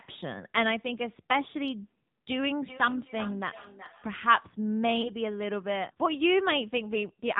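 Throughout, the speech carries the sound of the AMR narrowband mobile codec at a low rate, consistent with the 7.4 kbps mode. Nothing passes above 4 kHz, and the voice is plainly buzzy and synthetic. A spectrogram shows a hard ceiling at 4 kHz with smeared, coarse harmonics.

From 2.64 to 4.23 s there is feedback echo between two devices. A second device in the room replays what this microphone sent, and this microphone picks it up again. Each syllable returns roughly every 0.4 s, thin and ringing, at about 16 dB below the speech. The waveform shows faint, evenly spaced copies trailing the bursts.

At 5.02 to 5.11 s comes a lost AMR speech frame, about 20 ms of missing audio, which fits a single dropped frame. The decoder reuses its previous settings at falling gain, giving a brief dip and warble before the voice returns slightly rough. The waveform shows a short notch in the envelope, and the spectrogram shows a momentary smear of frozen harmonics.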